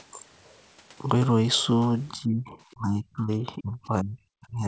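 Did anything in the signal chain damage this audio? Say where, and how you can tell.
Yes. The speech sinks sharply from 2.13 to 2.57 s, by roughly 25 dB at its deepest, recovers briefly, then drops again from 2.73 s to the end, by about 35 dB. The likely cause is speech suppressed in double talk: the call echo canceller, unable to separate this talker from loudspeaker echo, attenuated both. The 8 kHz band limit fits wideband G.722.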